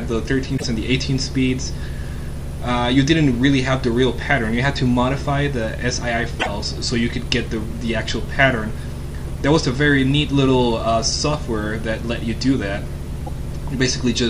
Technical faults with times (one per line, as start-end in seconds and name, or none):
0.54-0.64 damaged data in a compressed stream
6.36-6.47 damaged data in a compressed stream
13.26-13.29 damaged data in a compressed stream